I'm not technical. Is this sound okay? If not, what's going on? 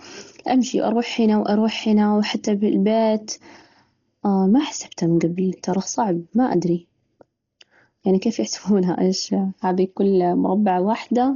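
No. From start to finish the speech sounds dull and muffled, with nothing above about 7 kHz, and a rough, fluttering hiss clings to the voice. That hiss, not just missing treble, points to heavy Dolby Digital compression as the likely cause.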